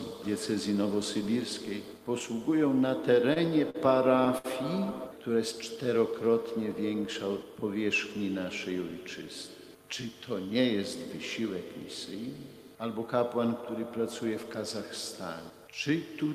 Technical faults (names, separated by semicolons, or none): short stall from a late packet; jitter buffer speed-up